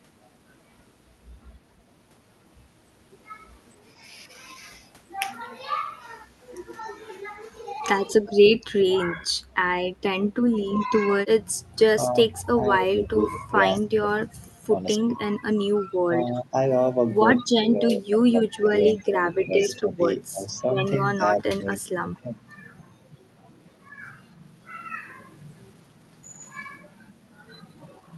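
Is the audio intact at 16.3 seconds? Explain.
No. From 14.98 to 16.54 s the speech dips by up to about 20 dB, likely speech suppressed in double talk, where the echo canceller attenuated the near-end talker during overlap.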